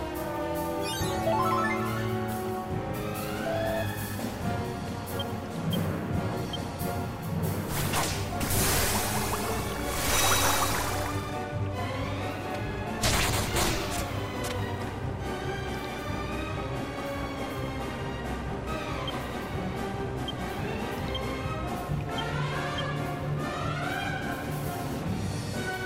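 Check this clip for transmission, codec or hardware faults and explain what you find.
No faults found.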